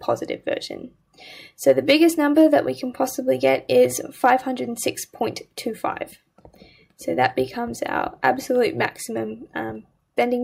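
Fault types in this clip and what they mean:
No faults can be heard.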